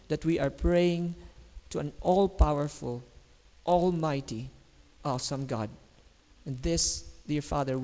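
Throughout, a resampler restarted on every block, converting 48 kHz to 16 kHz in 20 ms pieces, errs at each edge: a 50 Hz buzz that, unlike mains hum, stops in silence.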